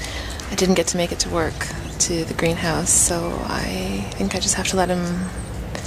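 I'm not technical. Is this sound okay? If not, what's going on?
Yes, nothing wrong can be heard in this sound. It comes across steady and even, with no glitches or interruptions to point to.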